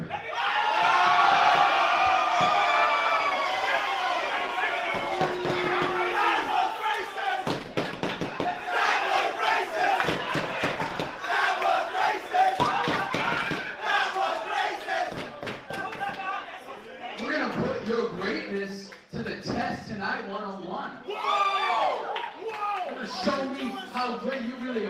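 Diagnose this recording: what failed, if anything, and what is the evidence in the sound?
Nothing failed: the sound carries no evidence of a fault at any stage.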